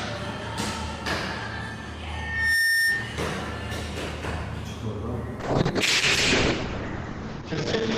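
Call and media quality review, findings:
Loudspeaker feedback squeal, 2.13 to 3.18 s: a single 1.8 kHz tone swelling over less than half a second to roughly 10 dB above the programme. The mic is picking up its own loudspeaker, and loop gain exceeds unity at that frequency.

Call bitrate drop, 5.41 s to the end (about 8 s): the audio turns coarse and watery, and the top end is cut to 8 kHz instead of reaching 20 kHz. This fits the encoder falling from around 48 kbps to about 7 kbps after the bandwidth estimate fell. There is no recovery before the clip ends.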